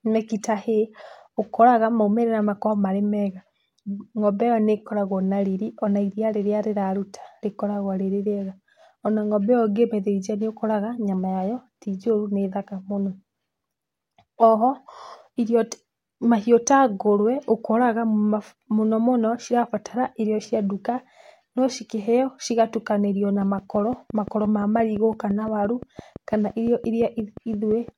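A train of clicks, 23.42 to 27.89 s, ticks through this speech at a steady 5.8 per second, around thirty pulses, likely from electrical interference.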